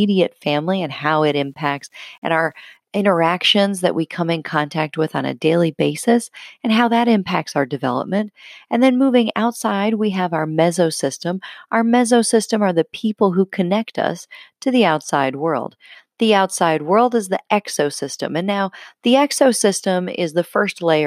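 Low bit depth without dither runs from 1.27 to 2.77 s: the speech turns grainy, with a rough distortion that tracks its loudness, roughest on quiet passages. This is likely rounding to about 10 bits with no dither, leaving error roughly 50 dB down.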